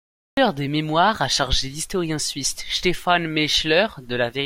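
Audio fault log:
0.00–0.37 s, cut-off start: capture or streaming began late, so the sound was already underway when it started and the first 0.37 s hold only digital silence. At 0.37 s the speech jumps in mid-sound, with no natural attack or fade-in, which makes the opening feel sliced off rather than spoken into. The abrupt entry falls right before "des mémoires a chargé", so that phrase begins already partway through an utterance.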